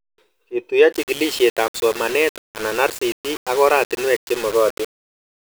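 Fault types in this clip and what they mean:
Low bit depth without dither: From about 0.93 s to the end, the speech turns grainy and rough, with a gritty distortion that rises and falls with the voice and sits only around 15 dB below it. Quiet stretches break up or sputter instead of fading smoothly. The likely cause is the signal being rounded to roughly 5 bits with no dither, so the rounding error tracks the waveform and becomes audible distortion rather than steady hiss.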